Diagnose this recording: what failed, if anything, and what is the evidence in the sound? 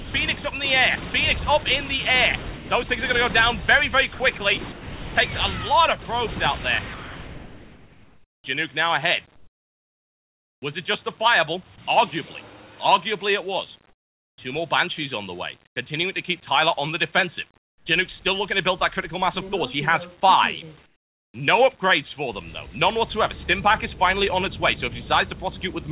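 Call processing, sound chopped by the voice detector: at 0.0–2.7, 4.14–5.16 and 6.94–11.78 s, stretches of sound flicker into synthetic hiss, likely from voice-activity gating switching transmission off and on.

Call processing, comfort noise in place of the background: at 13.9–15.76, 17.58–17.86 and 20.86–21.34 s, the background turns featureless, about 14 and 16 dB quieter in the latter two, likely during pauses without transmission.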